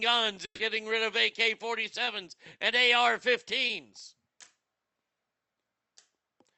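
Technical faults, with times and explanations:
0.45–0.61 s, burst of packet loss: Just before "rid of", about 140 ms of the call failed to arrive in time. The receiver stretched the last sound into a held, dulled continuation that fades, and the final 80 ms or so falls to silence before the audio resumes further along with that stretch missing. The length, fade to silence and jump in the sound set it apart from the brief smears later in the clip.
2.05–2.09 s and 3.67–3.71 s, short concealed packet loss: Each time, roughly 20 ms of audio was lost and the decoder filled the hole by extending the preceding sound, then blended back into the real signal. It comes across as a quick smear or slight wobble rather than a dropout, with no silence. This brevity and seamless recovery distinguish it from the longer burst at the start.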